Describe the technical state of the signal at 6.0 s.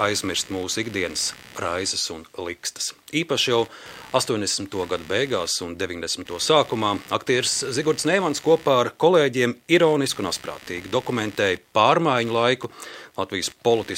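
Computer activity noise is present at 6.0 s, as it is across the whole clip. Shifting load in the computer's processor, graphics card or mouse disturbs the ground that the audio circuit shares with them, and those disturbances leak into the signal. Here it comes through as a buzzing, chirping texture pulsing at around 70 times per second, sitting roughly 25 dB below the sound and following the machine's activity rather than anything in the audio itself.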